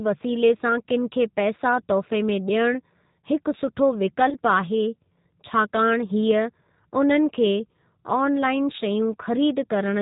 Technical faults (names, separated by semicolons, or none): G.729 codec; VoIP packet loss concealed by the speech codec